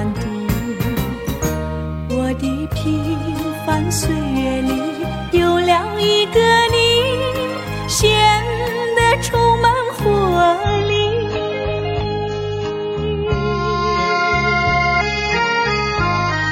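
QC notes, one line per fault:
10.64 to 16.52 s, adaptive stream at a lower bitrate. The sound switches abruptly to a duller, grainier version with no gap. Nothing remains above 7 kHz and codec artefacts thicken. This fits the stream stepping down from roughly 96 kbit/s AAC to about 16 kbit/s.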